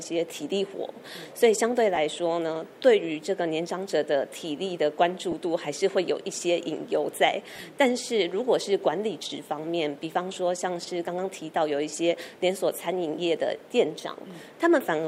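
Lost LE Audio frames occur at 1.95–1.97 s, at 5.32 s and from 7.53 to 7.61 s. The LC3 decoder fills each gap by replaying the last spectrum with scrambled phase, leaving a brief noisy smear. The last loss spans 60 ms over 75 ms, with gaps of up to about 30 ms.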